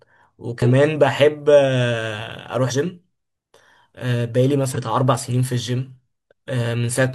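Speech with compressed frames skipped at 0.62 s, 2.67 s and 4.72 s, where the audio jumps forward by roughly 40 ms, 150 ms and 100 ms. Whole coded frames were lost or rejected by the decoder, so a chunk of speech is simply missing. Unlike a dropout, there is no silent gap.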